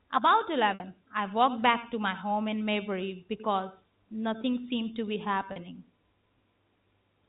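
At 0.74 s and again at 5.52 s, packet loss with pitch repetition covers gaps of 60 ms and 40 ms. The receiver loops the last pitch period, so the 40 ms gap sounds like a brief held, buzzy tone rather than the silent hole or click of a plain dropout, while the 60 ms gap outlasts the fade and drops into silence before the speech returns with a short cross-fade.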